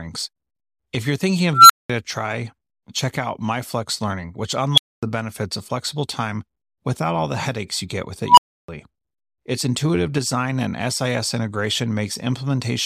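An unstable filter blows up three times in this speech: at 1.53 to 1.90 s after "you're thinking", a tone near 1.5 kHz swells over 165 ms; at 4.74 to 5.03 s, near 3 kHz over 41 ms; and at 8.27 to 8.68 s after "headaches you get with", near 1 kHz over 109 ms. Each time, bad recursive coefficients drive the output toward overflow, and the sound cuts out for 200, 250 and 310 ms until the filter resets. Unlike acoustic feedback howl, each tone ends in an abrupt dead silence.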